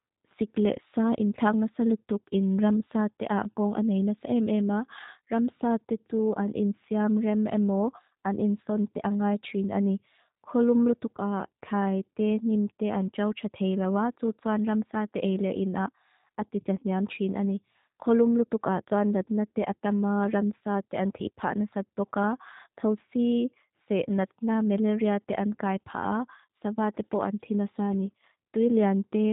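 From start to finish the speech has the G.729 codec sound: nothing above about 3.8 kHz, and a plainly rough, slightly synthetic texture. The codec rebuilds each 10 ms frame from a filter, pitch predictor and a few pulses, which fits an 8 kbit/s link.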